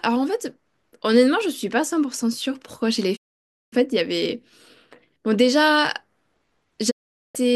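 Speech, interrupted twice by a digital broadcast dropout. The sound fades out over about 20 ms and goes silent from 3.15 to 3.74 s, then again from 6.89 to 7.37 s. Each time the receiver stopped getting usable frames, most likely from signal loss or failed checksums, and muted until good frames returned. Whatever was broadcast during those gaps is gone. The programme resumes further on rather than where it stopped.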